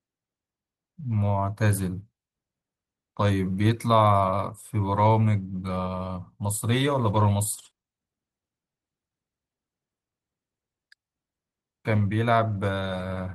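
Speech carried over a call path with a 12 kHz top end, where from 7.53 to 7.85 s repeated packet loss leaves gaps up to 20 ms, patched by extending prior sound, producing choppy, robotic speech.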